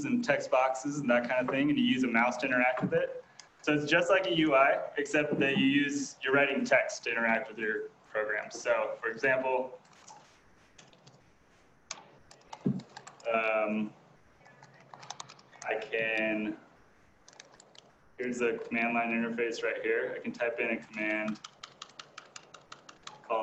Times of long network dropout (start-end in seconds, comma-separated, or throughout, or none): none